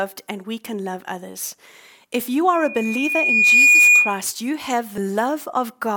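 Loudspeaker feedback squeal runs from 2.53 to 4.22 s, ending just before "you have". A microphone is picking up the loudspeaker it drives, and at 2.4 kHz the gain around that loop exceeds one, so the tone feeds on itself. It swells over roughly a second into a piercing steady whistle that sits around 10 dB above the speech.

Compressed frames skipped at 4.98 s, right after "you have": a short stretch of the coded stream never reaches the output, either missing or discarded by the decoder as damaged. The speech jumps forward by about 70 ms, which fits the loss of around two 32 ms frames.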